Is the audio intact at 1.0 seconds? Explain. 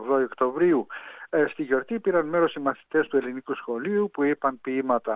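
Yes, the audio is intact at 1.0 seconds, with no dropout, click, distortion or other fault at that moment.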